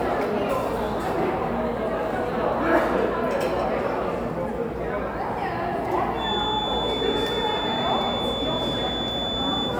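A feedback whistle runs from 6.13 s to the end at 9.80 s: a thin, steady 3.5 kHz tone sitting roughly 5 dB beneath the sound and swelling and fading slowly in level. The likely cause is a loudspeaker-to-microphone loop held just at the edge of feedback, sustaining that one frequency without building further.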